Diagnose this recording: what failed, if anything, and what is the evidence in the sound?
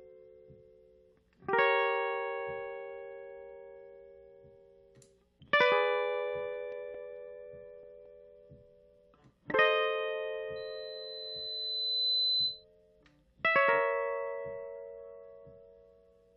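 Storage/playback stage, CD scratch ticks: between 6.28 and 8.5 s the music carries eleven regular ticks, about five per second, each only a few milliseconds long. That steady spacing matches one blemish passing the laser once per disc revolution. At each pass the damaged region exceeds what the error correction can rebuild, so the player conceals the missing samples by interpolating or muting them, leaving a brief click or micro-dropout.

Codec stage, damaged data in a compressed stream: at 9.53 s there is a single short blip in the music. It points to corrupted bytes in the encoded file or stream. The decoder could not correctly parse the affected frame, so it produced a momentary burst of wrong output and then resynchronised on the next valid frame header. The event is isolated and brief, so the damage was confined to a very small span of the stream.

Analogue/acoustic path, loudspeaker feedback squeal: from 10.56 to 12.65 s a pure tone at 4 kHz rises out of the music, building over roughly a second and a half until it sits a few dB above the programme. 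A microphone was picking up the loudspeaker it fed, and at 4 kHz the loop gain exceeded unity. That one frequency reinforced itself on each trip around the loop until it ended at 12.65 s.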